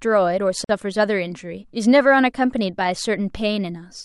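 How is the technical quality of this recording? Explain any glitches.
The recording has one glitch. From 0.64 to 0.69 s, a gap at a join of encoded pieces cuts the speech. The sound drops out for about 48 ms. The audio was likely encoded in separate pieces and joined without trimming. Each encoder pass adds silent delay at its start and pads its final frame. Both remain at the seam. You hear a brief hole whose edges are smeared by the codec. The speech then resumes exactly where it stopped.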